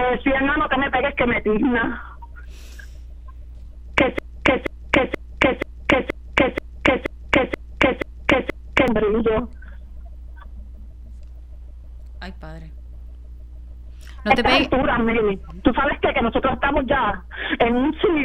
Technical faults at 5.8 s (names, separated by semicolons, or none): broken-record loop